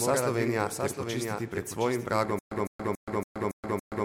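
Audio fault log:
throughout: doubled audio track. A second full-band copy of the speech trails roughly 0.7 s behind, about 5 dB quieter, with no decay or room colour, so every phrase is echoed flatly; likely a second capture through a slower path mixed in.
2.39 s to end: stutter with silent gaps. A 157 ms fragment repeats six times, every 281 ms, each followed by 124 ms of digital silence, and the speech that should follow never arrives; likely a stalled stream replaying its last buffer at each retry.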